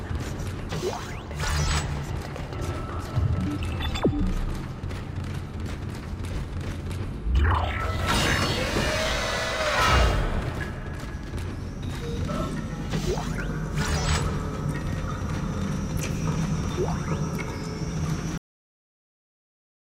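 Cut-off end at 18.38 s: the audio halts abruptly partway through a sound and falls straight into digital silence for the remaining 1.4 seconds. There is no tail or natural decay. The level goes from active signal to silence at once. This happens when the final buffers of the stream never reach the output, either because they were not written to the file or were dropped before playback. The sound is severed rather than brought to a close.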